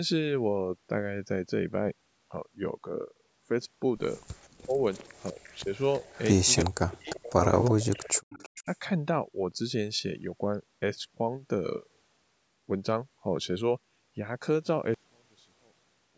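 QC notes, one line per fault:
4.35–8.74 s, echo leak: a faint delayed copy trails the speech by 347 ms, about 25 dB down, likely from a loudspeaker echo the canceller missed.
4.62–4.77 s, 5.31–6.04 s, 6.65–8.68 s, speech suppressed in double talk: the speech dips by roughly 15 to 40 dB, likely from an echo canceller ducking both talkers at once.
14.94 s to the end, one channel inverted: the centred sound almost vanishes, dropping about 34 dB, likely from reversed polarity on one channel cancelling on mono summing.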